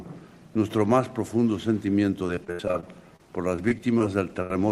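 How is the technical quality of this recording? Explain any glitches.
The recording has clear network transmission faults in its later part, appearing as two choppy stretches and one short dropout near the end.

Repeated packet loss (robotic sound) runs from 2.27 to 3.20 s and again from 3.56 to 4.01 s. Packets kept arriving lost or late, and each hole was patched by extending the preceding sound. The first stretch has ten gaps, the longest about 75 ms, covering roughly a quarter of that span. The second has four gaps of 17 ms or less. The result is choppy audio with pieces missing.

A burst of packet loss occurs from 4.42 to 4.51 s. About 70 ms of consecutive audio never arrived in time, so the receiver continued the last sound while fading it down, producing a held buzz or dying hiss before playback resumes with that stretch gone.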